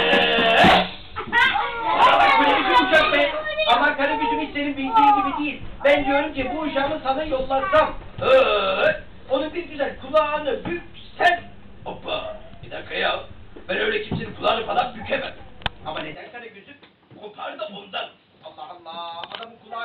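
At 16.15 s the sound abruptly turns duller and boxier and stays that way to the end, with nothing above 5.5 kHz. The level drops by roughly 10 dB, and a new background noise appears, roughly 35 dB below the signal. The change happens with no gap or silence. This is likely an input switched to a poorer device, such as another microphone or a headset's call profile, whose narrower band, different tone and own noise take over mid-recording.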